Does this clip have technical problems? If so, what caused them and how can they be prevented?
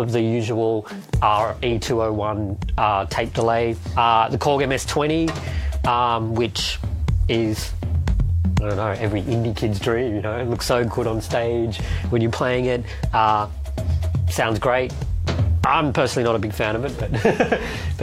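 No, nothing in this clip points to a technical fault, so there is nothing to trace back or prevent.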